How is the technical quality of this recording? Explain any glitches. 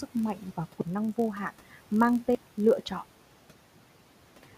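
The recording has one real problem, running the whole way through: a block size mismatch (padded), heard as a low buzz under the speech. The room noise sits about 22 dB below the voice, and that's just the space the mic was in.

The mismatch runs from start to finish. One stage hands over blocks a touch shorter than the next stage reads, which fits a 1024-sample read size, and the leftover bit of every block gets zero-filled. Those tiny silent slivers repeat at 46.9 Hz, so you get a steady buzz at that rate. The speech runs about 0.1% slow (0.999x).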